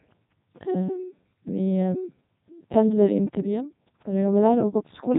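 From start to finish the speech carries the sound of the Codec 2 vocoder, consistent with its 3.2 kbit/s mode. The voice is rebuilt from sine waves driven by pitch and envelope, so it sounds robotic and buzzy. A spectrogram shows neat harmonic stripes and nothing above 3.8 kHz.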